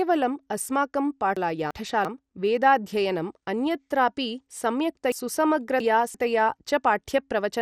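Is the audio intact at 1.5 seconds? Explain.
No. From 1.37 to 2.05 s the audio has chunks out of order: two blocks of about 341 ms each are swapped, so the block that should come first plays one chunk late. Nothing is missing, but that stretch sounds jumbled, with three hard joins, and it ends just before "वेदाध्ययनम् अन्यत्रापि". On a waveform the joins show as abrupt discontinuities. On a spectrogram the harmonic tracks break off at the joins and restart out of line.

The moment also carries the damage heard across the whole clip, which is likely MP2 compression at a low rate, consistent with about 64 kbps. Upper sub-bands are switched off, leaving nothing above 14.4 kHz, and the bands that remain are coarsely quantised. The speech therefore sounds dull, with a gurgling, granular texture. On a spectrogram this shows as a hard ceiling at 14.4 kHz with blocky patches in the higher bands that blink on and off.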